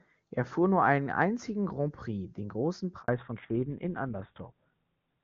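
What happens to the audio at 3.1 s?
At 3.02 to 3.08 s a handover gap cuts the speech for 60 ms: no frames arrive while the call switches networks, so the sound drops to silence. From 3.08 s to the end, a fallback to narrowband removes everything above 4 kHz, leaving the speech duller and rougher, which fits a switch from HD Voice to GSM full rate.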